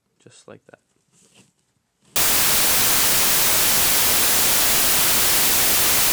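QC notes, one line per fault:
2.16–6.12 s: samples built from the wrong bytes. From here to the end, the reader assembles each sample from misaligned or swapped bytes. The rapidly changing low bits now dominate every value. The result is loud, harsh broadband noise.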